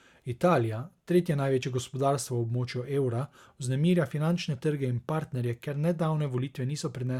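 At 1.63 s the speech skips forward, losing roughly 20 ms of sound and joining the two edges with no gap. This is likely a dropped buffer (overrun): samples were overwritten by the hardware before the program collected them.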